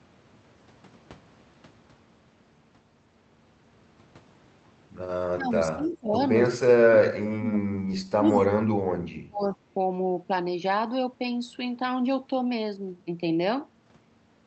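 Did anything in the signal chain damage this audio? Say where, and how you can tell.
Yes. The speech sinks and breaks up at 5.35–6.18 s, 6.48–7.99 s, 8.16–8.61 s and 9.28–9.57 s, falling roughly 20 to 35 dB at worst. This is speech suppressed in double talk, likely call processing's echo canceller muting the talker while the other side spoke.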